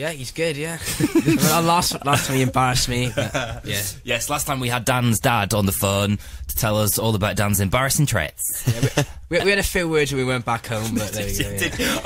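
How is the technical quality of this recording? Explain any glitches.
The technical quality of this recording is sound, with no glitches to explain.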